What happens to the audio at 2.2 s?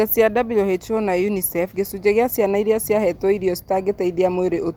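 Nothing goes wrong at 2.2 s; the speech continues intact through that moment, with no dropout, click, distortion or other fault to be heard.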